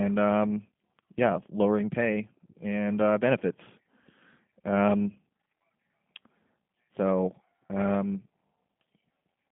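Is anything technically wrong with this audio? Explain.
Yes. Throughout the speech, G.729 codec damage is plainly audible. The sound sits in a telephone band of roughly 150 Hz to 3.5 kHz, with nothing above 3.5 kHz, and its character fits the 8 kbit/s G.729A variant. The codec rebuilds each stretch from a vocal tract filter, a pitch predictor and a few pulses, so the speech comes out rough and slightly synthetic. That roughness sets it apart from simple narrowband filtering, which would sound dull but clean.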